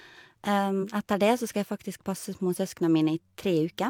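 At 0.79 s the speech lurches forward. A short stretch of the talker's sound seems to vanish, and the next syllable arrives early. This is compressed frames skipped: about four whole frames, each roughly 42.7 ms, were dropped or rejected by the decoder as damaged. That cuts out around 150 ms of audio. The join runs through 0.85 s.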